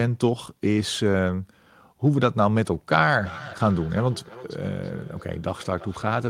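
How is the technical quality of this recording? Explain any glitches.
The recording is clean until 3.15 s, when a feedback echo between two devices begins and continues to the end. A second device in the room replays the speech into the microphone, and the echo canceller can't remove sound it didn't play itself. Each phrase returns roughly a third of a second later, peaking about 18 dB below the speech. The repeat comes at a fixed interval, which is what separates it from the smooth, diffuse tail of room reverberation.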